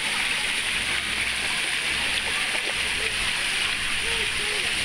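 Compressed frames skipped at 2.09 s: the sound jumps forward by roughly 150 ms, consistent with several whole frames of about 23.2 ms each being dropped.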